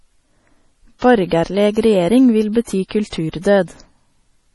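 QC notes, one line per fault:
Throughout, MP3 compression: nothing above 11.4 kHz and a heavy watery, swirly texture as weak frequency lines drop in and out, likely from a low bitrate around 32 kbps.
0.99–1.02, 1.28–1.31, 1.73–1.77, 3.09–3.13 and 3.41–3.45 s (the last two after "vil bety"), pre-echo: a 32–39 ms hiss before each attack, as block-wide quantisation noise spills into the quiet lead-in.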